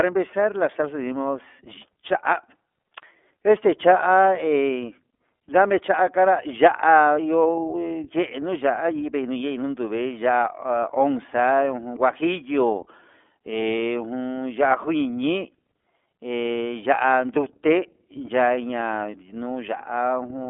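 A speech clip carrying iLBC codec damage throughout: nothing above 3.7 kHz, a 250 Hz to 3.5 kHz telephone band, and plainly audible rough, synthetic texture. Unlike a plain band-limit filter, independently coded 30 ms frames leave this grain, which fits a 13.33 kbps mode.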